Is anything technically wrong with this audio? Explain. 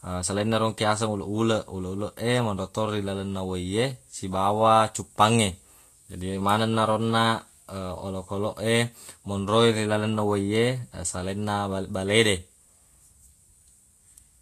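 Yes. Throughout, the speech carries Vorbis compression damage, likely from low-bitrate encoding, around 34 kbps. Nothing is present above 14.2 kHz, and the coarsely quantised treble turns fine detail into grainy hiss with roughened tones. That noisy replacement of detail, rather than a clean dull roll-off, separates it from simple low-pass filtering.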